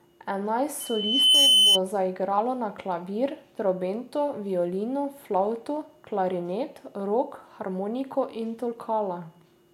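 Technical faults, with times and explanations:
0.8 to 1.79 s, loudspeaker feedback squeal: the microphone picks up the loudspeaker it feeds, and at 3 kHz the loop gain exceeds one. That tone reinforces itself, swelling over about half a second into a squeal roughly 10 dB above the speech.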